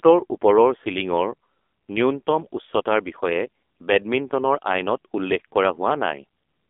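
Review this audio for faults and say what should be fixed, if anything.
The speech passed through the AMR narrowband mobile codec for the whole clip, rebuilding it from a vocal-tract model and a few pulses per 5 ms. Only about 250 Hz to 3.5 kHz survives, and heavy buzzy, synthetic coloration suggests roughly 6 kbps. Keep the recording path wideband and uncompressed, avoiding mobile-network capture.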